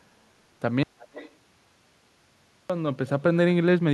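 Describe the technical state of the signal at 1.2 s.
At 1.2 s the signal sits inside an audio dropout to a faint residue, from 0.83 to 2.70 s. The speech vanishes abruptly. Only hiss remains, about 45 dB down. The likely cause is a lost feed on a path that stayed live.

An echo leak overlaps it, from 0.99 to 1.36 s. A delayed copy of the voice returns 337 ms late, about 20 dB below the speech. It likely comes from loudspeaker pickup that the far end's echo canceller missed.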